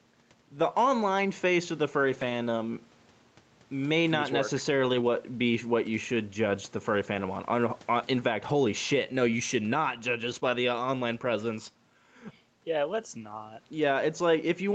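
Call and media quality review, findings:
Gain pumping, throughout: loud and soft parts squashed closer in level, roughly 10 dB swing, likely caused by input gain set too high with a fast limiter clamping each peak.

Lost packets rebuilt from error correction at 2.13–2.31 s (after "face of the furry"), 4.85–5.07 s, 7.13–7.19 s (after "should judge the furry"), 8.49 s, 9.33–9.39 s, 10.23–10.37 s (after "should not judge"), 10.43–10.49 s, 11.25 s. No gaps, but rougher, noisier stretches of 20 to 120 ms, decoded from Opus's low-bitrate in-band redundant copies.

Short concealed packet loss at 10.39–10.43 s, between two rebuilt stretches: brief smear where about 20 ms never arrived, so the decoder extended the preceding sound and crossfaded back.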